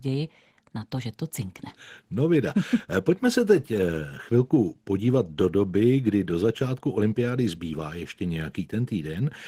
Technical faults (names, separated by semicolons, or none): Opus voice compression